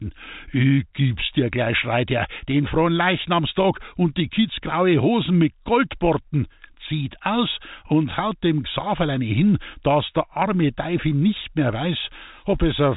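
Nothing stood out on listening to this telephone-band speech, whose content stops at about 3.8 kHz as expected for G.711 telephone coding.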